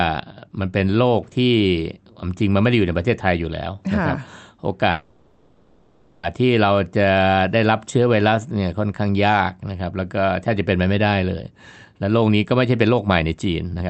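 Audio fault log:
4.91 to 6.25 s, call audio freeze: The sound stalls for about 1.3 s. The last sound is carried on as a fading buzz or hiss and never drops to silence. The stall most likely comes from packets held up in transit, which emptied the jitter buffer. The receiver kept playing by stretching what it last had. When the packets arrived, the audio resumed where it had stopped. Nothing is lost, but it now runs about 1.3 s late.
11.78 to 13.82 s, jitter buffer speed-up: The audio plays about 10% fast with its pitch unchanged, so it sounds hurried. The receiver was holding more audio than it aimed for and cut the excess delay. It did this by removing short slices, each one or a few pitch periods long, many times in a row. About a fifth of a second is removed. The Opus coding noise and the cut-off near 8 kHz carry through this stretch.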